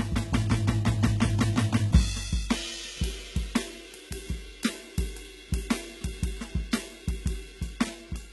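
HE-AAC compression, likely the cause, runs through the whole music clip: the treble is rebuilt by copying lower bands upward, so its harmonics misalign and high detail turns gritty and metallic, with heavy damage and nothing above 11.8 kHz, which fits a bitrate near 16 kbps.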